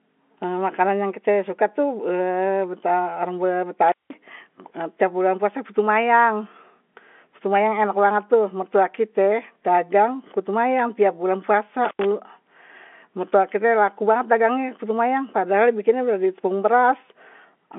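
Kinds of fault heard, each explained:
Intermittent contact: speech cuts out with crackly edges for about 0.18 s at 3.9 s and 0.09 s after "putu mayang setiap bulan", as a loose connection opens.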